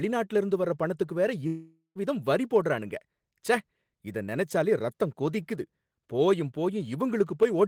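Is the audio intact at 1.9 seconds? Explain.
No. At 1.9 s the speech falls inside a long network dropout from 1.47 to 1.98 s, after "இருந்து வர்ற பணத்துக்கு வேற". Audio likely stopped arriving. The receiver extends the last sound as a fading buzz, then about 0.1 s of silence. Roughly 480 ms is lost before "வரி போடறானுங்க".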